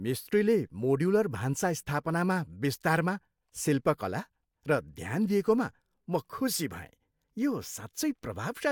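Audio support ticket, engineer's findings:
No technical faults found.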